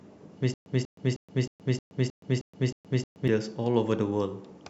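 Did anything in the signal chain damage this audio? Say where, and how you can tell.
Yes. From about 0.54 s to 3.28 s there's a clear stutter with silent gaps: the same 190 ms burst of speech comes back nine times, each followed by roughly 122 ms of dead digital silence, so it cycles every 312 ms like clockwork. That's likely a playback or streaming stall, where the player kept re-serving its last buffered fragment on each retry and then ran dry. Whatever speech belonged in that stretch is simply gone.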